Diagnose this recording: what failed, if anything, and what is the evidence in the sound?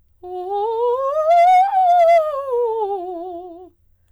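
Hard clipping affects the music from 1.30 to 2.18 s. The signal runs about 4 dB past what the stage can pass, so peaks are cut flat. Those flat tops add high harmonics, heard as crackle on peaks. An overloaded converter input fits this.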